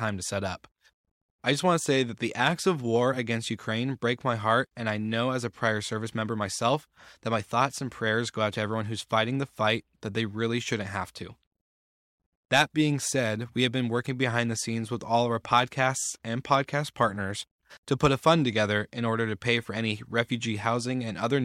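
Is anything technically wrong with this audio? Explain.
Yes. From 0.10 s to 21.40 s there are clock slip clicks, likely from two devices running on unsynchronised clocks about 400 ppm apart, so a single sample drops or repeats roughly every 50 ms. Hundreds of faint, regular ticks merge into a soft rattle under the speech.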